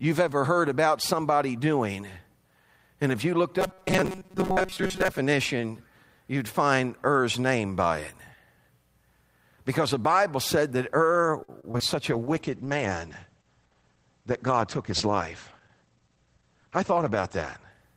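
From 3.59 to 5.18 s, just after "if you looked", the speech turns into a rigid, metallic buzz at 188 Hz. It still loosely follows the syllables. This is robotic sound from repeated short buffers. New audio likely arrived too slowly, so the playback kept looping the last fragment while fresh audio was skipped. Most of this stretch is repeated material. A 188 Hz buzz fits a loop of roughly 5.3 ms.

From 11.43 to 11.82 s the speech becomes choppy. This is repeated packet loss. Four gaps occur in quick succession, the longest 48 ms. Each hole was patched by stretching the last sound forward, and 123 ms was filled this way. About a third of the span is concealed audio, and 60 ms of real speech is simply missing.

At 12.12 s a call bitrate drop begins, and it lasts to the end of the clip. The encoder fell from 32 to 11 kbps and stayed at the lowest rate for 5.27 s. The coding becomes coarse, and the sound turns rough and watery. 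The audio bandwidth also shrinks from 20 kHz to 8 kHz, which removes the upper treble and leaves the speech muffled.

From 14.21 to 14.66 s, inside the low-bitrate stretch, there is a jitter buffer speed-up. The receiver held more audio than it wanted. To cut the delay, it removed short pieces of one or a few pitch periods, many times in a row, about 50 ms in total. The speech plays at 110% speed without any change in pitch. It sounds briefly hurried.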